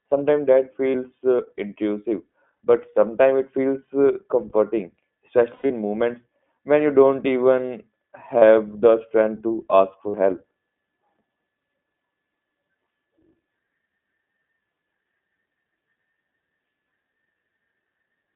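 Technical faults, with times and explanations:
Throughout, iLBC codec: the speech is confined to a narrow phone band of roughly 200 Hz to 3.5 kHz and sounds plainly rough and synthetic, consistent with iLBC at 15.2 kbps coding each 20 ms frame on its own. Unlike a wideband codec, nothing above 3.5 kHz survives.
0.90 to 0.96 s, 2.56 to 2.60 s, 5.54 to 5.71 s, 8.38 to 8.43 s and 10.10 to 10.16 s, lost iLBC frames: each gap is filled by the decoder repeating the last pitch cycle with added noise, heard as a brief held, buzzy vowel, mostly 40 ms, but around 5.5 s several losses scatter across 160 ms with a run near 100 ms that fades. Since iLBC frames stand alone, speech recovers almost instantly, unlike codecs whose errors carry over.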